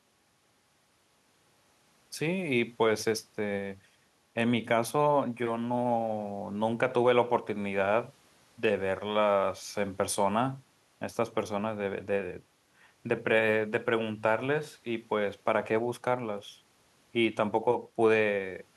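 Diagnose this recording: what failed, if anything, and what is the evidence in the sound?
No fault found in this recording.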